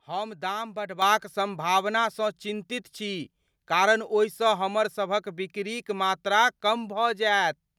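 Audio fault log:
1.02 s, microphone volume stepped up: the speech and the background noise floor jump together by about 7 dB in a single step. The call software judged the input too quiet and raised the device's microphone volume at once, so everything after this point sits louder.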